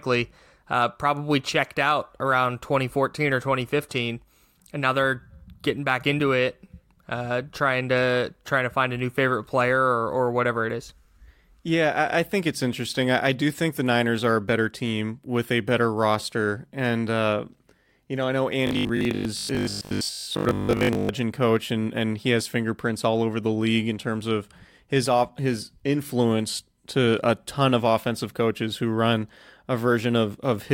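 The system is likely receiving new audio too seldom in this speech clip, so from 18.67 to 21.13 s it fills the gaps by replaying a short buffer of about 20 ms over most of that stretch. This is robotic sound from repeated short buffers: the loop imposes a fixed 50 Hz buzz, leaving a rigid, metallic tone that only loosely tracks the speech.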